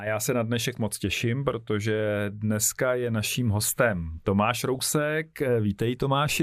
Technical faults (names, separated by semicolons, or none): DAB burbling